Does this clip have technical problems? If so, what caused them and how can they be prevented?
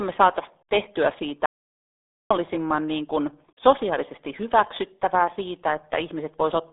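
Yes, two of them. The whole clip has the muffled, gargly sound of the RealAudio 14.4 codec. Nothing comes through above about 3.8 kHz, and the band sits roughly between 300 Hz and 3.6 kHz, which fits an 8 kbit/s dial-up speech codec squeezing the speech hard. To prevent it, encode or re-export with a modern codec at a decent bitrate instead of this legacy format.

From 1.46 to 2.31 s there's an audio dropout to silence: about 0.85 s of dead silence with no room tone at all, and whatever was said in that span is gone. The likely cause is the input dropping out through a loose connection, a failed link or a stray mute while the recorder kept writing silence. To prevent it, secure cables and links and monitor the input level while recording.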